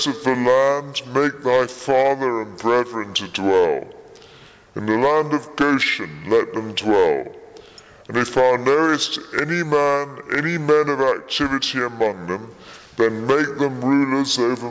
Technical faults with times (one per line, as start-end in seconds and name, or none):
0.00-14.71 wrong sample rate